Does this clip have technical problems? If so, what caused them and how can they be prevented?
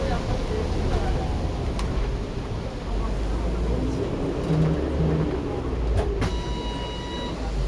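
No, nothing in this recording of sounds points to a technical problem; the signal holds steady throughout without any audible disturbance to trace or prevent.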